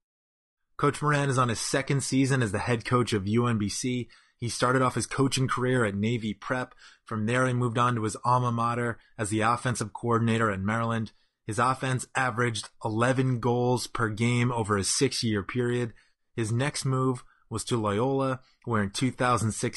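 Throughout the speech, the sound is rough and grainy. Noise fills the gaps between the pitch harmonics, and the top band sounds thin and synthetic. The damage is plainly audible from start to finish. This is likely low-delay AAC compression, the AAC-ELD kind used for video calls. Its short frames cannot separate closely spaced harmonics well. Bits run short, so detail is lost. The grain points to a low rate, around 32 kbps.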